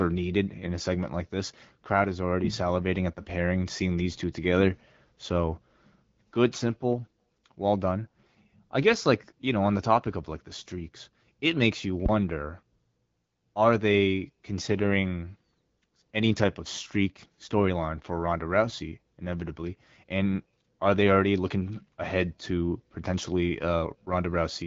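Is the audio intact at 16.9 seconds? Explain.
Yes, the speech at 16.9 seconds is intact, with no fault at that moment beyond the band limit of the AMR wideband (HD Voice) codec, which leaves nothing above about 7.5 kHz.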